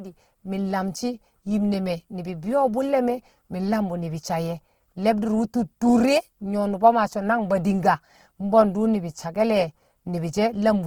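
A speech recording with a plainly audible grainy, rough texture running through the whole clip: consonants and vowels take on a noisy, sandpapery edge rather than a watery swirl, while the top end still reaches about 20.2 kHz. This is likely Opus compression in its CELT music mode, starved of bits at a rate that fits roughly 16 kbps, so the encoder preserves each band's energy but fills the detail with folded or noise-like content.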